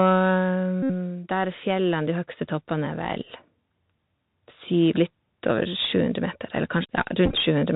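Throughout, the speech carries Bluetooth CVSD headset codec damage. Nothing passes above 4 kHz. S sounds turn scratchy, and a granular hiss sits underneath, plainly audible.

From 0.05 to 1.32 s, automatic gain is falling. The control judged the input too loud, or its background too strong, and eased it down by about 7 dB. Speech and background sink together.

From 0.83 to 0.91 s, a Bluetooth headset packet is repeated. About 71 ms of audio was lost. The chip replays the last packet's bits, making a steady buzz near 267 Hz.

From 1.27 to 3.09 s, automatic gain is rising. The control now found the input too quiet. It lifts the level by about 6 dB, and speech and background swell slowly together.

From 7.26 to 7.35 s, packet repeats return. They are scattered over 90 ms, about 53 ms lost in total. The runs are short, so the sound is a brief broken buzz rather than a steady tone.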